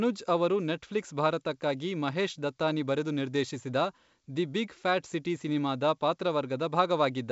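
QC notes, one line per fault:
No faults heard.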